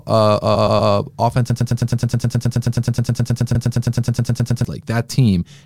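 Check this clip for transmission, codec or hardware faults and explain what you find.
Three faults are audible in this speech: two bursts of repeated frames and a long broken-record loop.

Repeated frames occur from 0.54 to 0.90 s. A 120 ms block plays three extra times, adding 360 ms. At 3.54 to 3.69 s, a 144 ms block plays once more, adding 144 ms. Compressed frames were sent more than once, so the decoder replays them. Each one stutters.

A broken-record loop runs from 1.5 to 4.65 s. A 106 ms fragment repeats back to back, 28 times. The likely cause is a stalled player or stream resending its last fragment. The audio meant for that stretch is lost.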